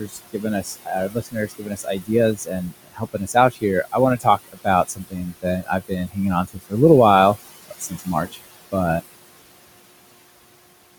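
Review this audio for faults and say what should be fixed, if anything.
Noise suppressor artifacts run through the whole take. The suppressor pulls the background down by about 20 dB whenever it decides a band is steady noise, so the room noise (sitting about 14 dB below the speech) pumps between phrases. Easing the suppression depth would calm that pumping.

Speech cut by the noise suppressor shows up from 0.0 to 6.74 s, where roughly three seconds of soft speech gets dragged down by as much as about 22 dB, and again from 7.68 to 8.37 s, with about a third of a second lost at up to about 20 dB. Quiet consonants and word endings get treated as noise and sound swallowed. A gentler threshold, or one that adapts slower, would keep them.

There's a cut-off end at 8.99 s. The audio stops mid-sound and drops straight to digital silence through 10.99 s, with no natural decay. That points to the final buffers never being written out. 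Flushing and draining the pipeline before closing the file would prevent it.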